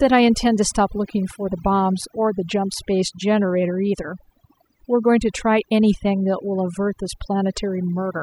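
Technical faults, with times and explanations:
Throughout, overdone noise removal: near-silent background with twinkling specks, because noise reduction was set too strong and cut quieter speech bands.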